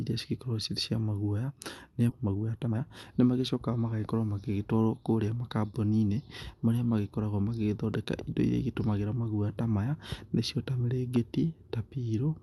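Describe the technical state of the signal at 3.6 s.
At 3.6 s the speech sounds hurried, running at about 118% of its normal rate while the pitch stays unchanged. This is a jitter buffer speed-up, spanning 2.19 to 4.14 s. The receiver's buffer had built up more audio than its target, so it repeatedly cut out short slices of one or a few pitch periods, trimming about 0.4 s in total to bring the delay back down.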